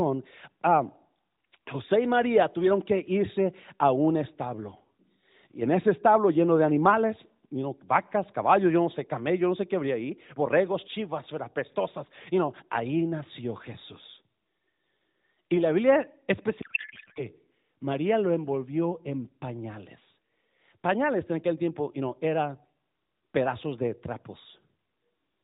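At 16.62 s a codec payload misread takes over the speech for about 0.64 s, until 17.26 s. The sender packs AMR frames octet-aligned, but the receiver unpacks them as bandwidth-efficient. Every field lands in the wrong place. The speech becomes garbled noise and warble that barely tracks it. Around it, the light narrowband AMR colouring points to the 12.2 kbps mode.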